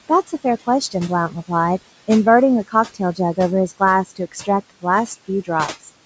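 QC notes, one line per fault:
Throughout: noise suppressor artifacts. The room noise is pulled down by about 17 dB between phrases and comes back up under the speech, so the background pumps. Unlike a cut in the speech itself, the suppression is acting on the noise floor.
1.29–1.5 s and 4.1–4.48 s: speech cut by the noise suppressor. In these spans the suppressor treated parts of the speech as noise and lowered them by up to about 10 dB and 13 dB. Roughly a tenth of a second of speech in the first span and somewhat more in the second sounds swallowed or faint. It is heard as gaps in the voice, not as changes in the background.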